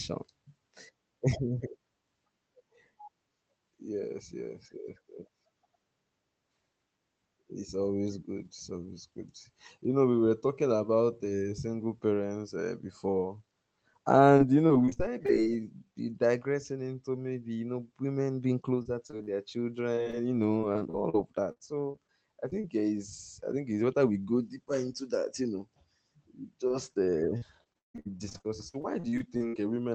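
Repeated packet loss makes the sound choppy and robotic from 14.37 to 15.30 s, 18.82 to 19.29 s (just after "you know women being"), 19.95 to 22.66 s and 26.68 to 29.55 s. Unlike a single dropout, the gaps recur rapidly and each is filled by stretching the previous sound.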